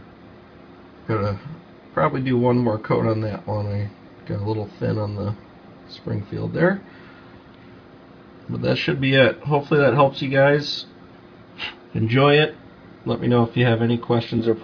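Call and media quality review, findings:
No audible faults found in the reviewed audio. Nothing to escalate for this call.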